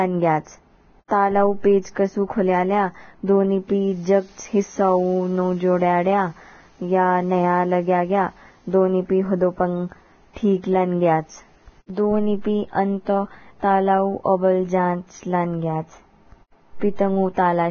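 Throughout the speech, the treble stops dead at 6.6 kHz. The upper range sounds hissy and grainy. Consonant attacks are smeared. This is likely heavy Vorbis compression, consistent with a bitrate near 16 kbps. Coarse quantisation has turned fine detail into noise.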